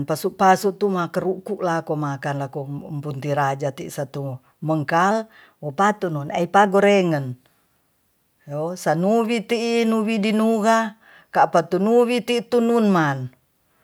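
A clock-matching resampler in this speech clip likely made a drift correction step, changing playback rate about 5.5% in one jump to rebalance its buffer. From 5.11 to 6.67 s, speech runs faster and about 93 cents sharp, nearly a semitone, then snaps back.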